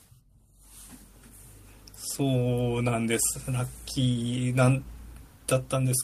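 No technical faults can be heard anywhere in this recording.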